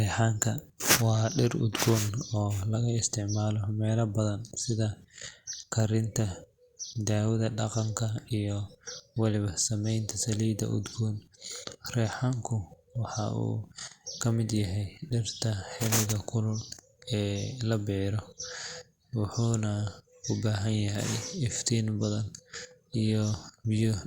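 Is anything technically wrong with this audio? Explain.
No, the speech signal comes through intact, with no technical faults anywhere in the recording.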